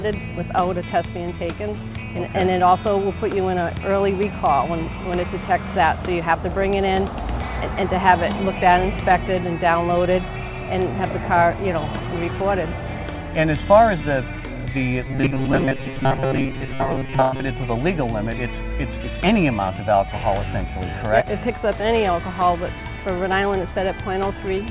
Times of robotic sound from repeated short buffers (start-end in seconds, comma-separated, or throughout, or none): 15.06-17.44